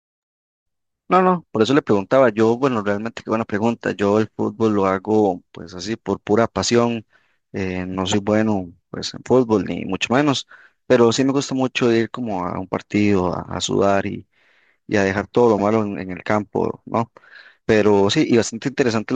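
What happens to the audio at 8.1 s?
Damaged data in a compressed stream: corrupted bytes in the encoded speech make the decoder misread its frames, lose sync and hunt for the next valid header. From 8.11 to 8.14 s, this produces a brief chirp or blip.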